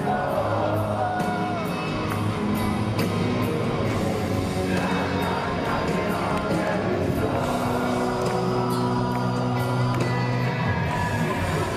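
No technical faults can be heard anywhere in the audio. There is nothing to place on the timeline and nothing that calls for correction.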